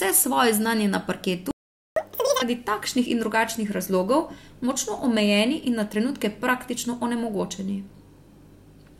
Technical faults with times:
1.51-1.96 playback stall
1.96-2.42 catch-up at higher speed

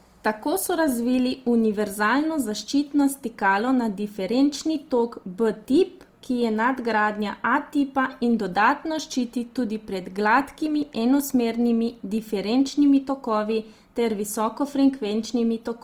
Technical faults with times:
0.00-15.83 Opus compression

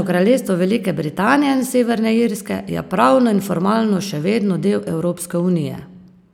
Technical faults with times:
none

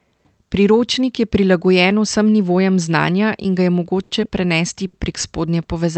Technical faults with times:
4.03-4.12 short stall from a late packet
4.87-4.95 short stall from a late packet

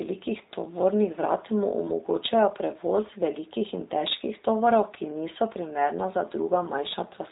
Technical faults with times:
0.00-7.32 G.729 codec

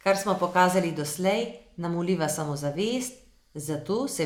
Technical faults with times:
none

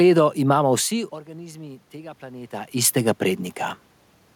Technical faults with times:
0.69-3.49 automatic gain rising

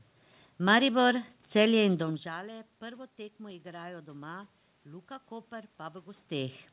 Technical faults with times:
none

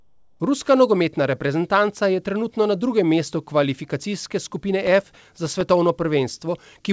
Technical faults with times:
0.00-0.40 comfort noise in place of the background
4.85-5.61 processor overload crackle

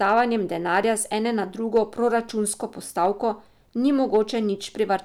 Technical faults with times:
0.04-0.20 hard clipping
0.74-0.78 hard clipping
1.76-1.79 hard clipping
3.02-3.06 hard clipping
4.14-4.18 hard clipping

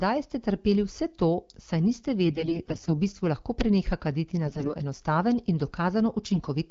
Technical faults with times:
2.24-2.91 AMR bit errors
4.46-4.75 AMR bit errors
6.29-6.50 AMR bit errors

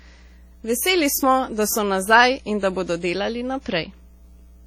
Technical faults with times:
0.00-4.67 mains hum
0.00-4.67 WMA compression

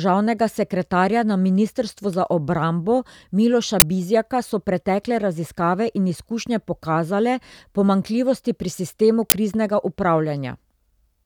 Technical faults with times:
3.80-3.82 uninitialised buffer
9.30 uninitialised buffer

